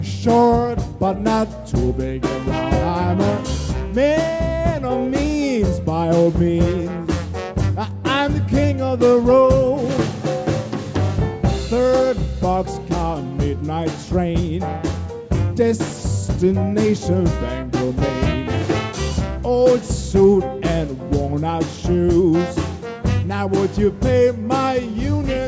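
No technical fault can be heard anywhere in the audio, which keeps a steady, intact signal throughout.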